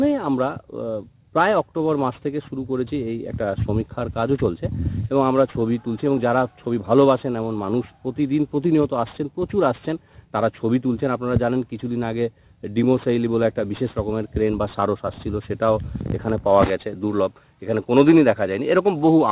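Aliasing runs through the whole clip: the audio was resampled down without a proper anti-alias filter, so content above the 4 kHz fold point reflects back as faint, unrelated tones, roughly 30 dB below the signal. This fits a drop to an 8 kHz rate, and it leaves the high end gritty and metallic.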